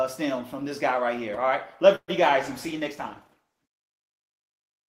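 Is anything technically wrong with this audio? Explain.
Yes. At 1.95 s a call audio freeze begins, lasting to 2.10 s. The sound stretches into a fading buzz, then about 60 ms of silence. Likely a starved jitter buffer delayed things 128 ms.

From 2.39 s to the end, a call bitrate drop takes hold. The encoder falls from 32 to 15 kbps, bandwidth shrinks from 20 to 12 kHz. Sound turns rougher and duller.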